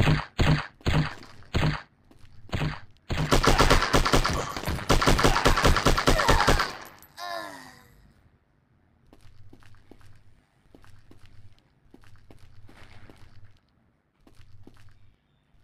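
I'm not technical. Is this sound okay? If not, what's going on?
No. From start to finish the sound carries overlap-add ripple. The audio was processed in short overlapping slices and stitched back together, but the slices were not blended so that their overlaps add up evenly. The loudness therefore dips and swells once per slice, about a hundred times a second, and the dips are deep. That rapid pulsing is what gives the whole clip its metallic buzz.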